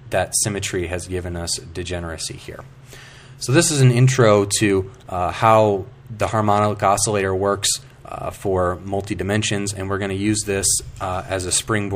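There are no technical faults to describe at any point in this audio.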